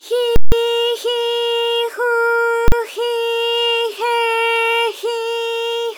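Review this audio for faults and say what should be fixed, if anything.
A very loud pop at 0.36 s and another at 0.52 s, with nothing audible between, then a single bang from 2.68 to 2.72 s: invalid numbers at full scale. A calculation produced infinite or invalid values that pinned the output at maximum level for blocks of 160 ms and 40 ms. To prevent it, check for invalid values after each processing stage and replace them with silence or reset the processor before output.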